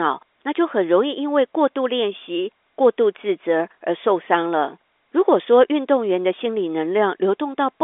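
No faults are present; the speech sits within a telephone band of roughly 300 Hz to 3.6 kHz with nothing above 3.8 kHz, consistent with G.711 A-law telephone coding working as intended.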